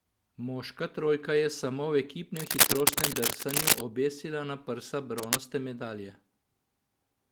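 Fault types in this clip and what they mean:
Cable scratch noise: dense, irregular bursts of crackling and rustling laid over the speech, somewhat louder than the speech itself. The likely cause is a worn cable, connector or control being moved, so its contact resistance jumps rapidly. The first burst runs from about 2.36 to 3.81 s, between "trojka je samo v" and "obesila na prsa". A second, brief one follows "obesila na prsa" at about 5.18 to 5.36 s.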